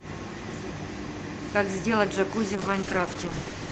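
Speech over a call link, with a call bitrate drop from 2.57 s to the end at 3.71 s. Before that, the audio carries the band limit of a call codec, near 8 kHz. At 2.57 s the sound turns rough and watery, and the top end grows more muffled. The call's bandwidth estimate fell, so the encoder coded far more coarsely. The sound fits an Opus stream falling from about 32 kbps to about 9 kbps. It does not recover before the clip ends.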